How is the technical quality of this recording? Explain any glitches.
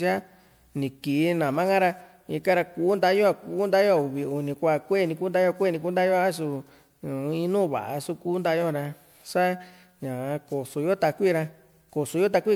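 The technical quality is compromised by one fault that runs through the whole recording. Generation loss affects the speech from start to finish: it sounds swirly and hollow, consonant attacks are smeared, and there is a watery grain that is worse than a single lossy encode would leave. The likely cause is repeated decoding and re-encoding with MP3, about seven passes at 128 kbit/s. Each pass quantised on a shifted frame grid, so noise and spectral gaps built up, with nothing above 20.9 kHz.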